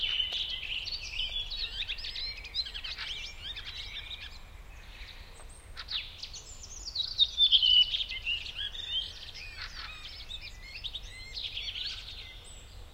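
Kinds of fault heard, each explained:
Electrical switching spike: A single sharp snap sits on top of the sound at 0.33 s. It lasts only a few milliseconds. It is quiet, peaking around -35 dBFS, so it is a small tick rather than a loud crack. It is likely an arc from a nearby switch, motor or static discharge, which the audio line picked up as a brief electrical pulse.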